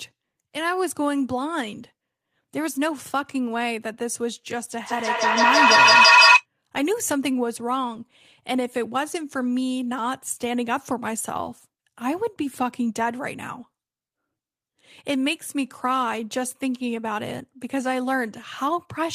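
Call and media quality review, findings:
Feedback echo between two devices, 4.84 to 6.46 s. Sound recirculates about every 150 ms and builds to about 11 dB above the speech rather than decaying. Probable component: second device in the same room replaying the call into this microphone, outside the echo canceller's reference.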